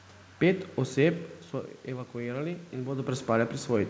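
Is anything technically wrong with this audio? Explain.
No, nothing here is a technical fault: the background noise is just the room, the level shifts around a second and a half and again near three seconds are the talker moving relative to the microphone, and the lack of anything above 8 kHz fits a wideband call codec such as G.722 doing its normal job.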